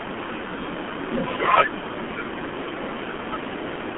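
From start to finish the speech carries heavy G.723.1 codec damage. The line band runs from about 200 Hz to 3.4 kHz, with nothing above 3.8 kHz, so sibilants and breath detail are gone and the sound is muffled. The coder rebuilds speech from a coarse vocal-tract model refreshed only every 30 ms frame. That leaves a hoarse, buzzy texture and smeared consonant onsets, which fits a very low bitrate of around 6 kbit/s.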